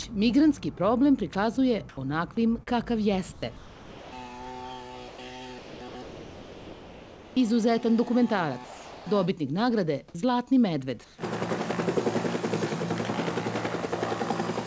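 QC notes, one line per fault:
0.02–0.81 s and 5.08–7.36 s, sound chopped by the voice detector: the sender's voice detector likely toggled transmission on and off. About 32 ms, then about 1.7 s, of real sound became synthetic comfort noise, so the sound turns choppy.
1.89–4.12 s, 8.64–9.06 s and 11.04–11.18 s, comfort noise in place of the background: transmission likely paused and the receiver generated noise roughly matching the background, for about 0.77 s, 0.42 s and 0.14 s. The detailed ambience gives way to flat, featureless hiss, about 2 dB quieter in the second gap and about 1 dB louder in the third, with the background about 19 dB and about 33 dB below the loudest sound.
2.63–2.68 s, short concealed packet loss: about 40 ms of audio arrived too late for the decoder, and roughly 34 ms was patched by extending the preceding sound before blending back. Within the comfort-noise stretch this is heard as a brief smear or wobble.
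10.12–10.14 s, onset clipped by the voice detector: the detector likely reacted late when sound resumed, so the first 20 ms were never sent and comfort noise filled them. The sound starts abruptly, without its soft beginning, through a G.722 path with nothing above 8 kHz.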